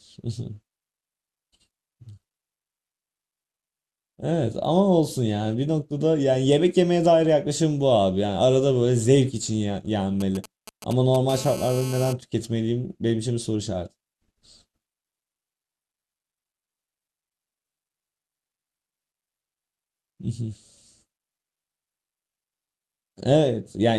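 At 10.2 to 11.2 s the speech is interrupted by GSM signalling bursts: a galloping dit-dit-dit of brief buzzes at 217 Hz, roughly 15 dB below the speech. A nearby 2G phone sending short groups of radio bursts during signalling is rectified by the audio circuit.

From 11.29 to 12.13 s a GSM phone buzz follows, a steady, hard, raspy 217 Hz tone rich in harmonics, about 15 dB below the speech and unrelated to it. Here the phone transmits in call mode, 217 bursts per second, and the circuit demodulates those pulses.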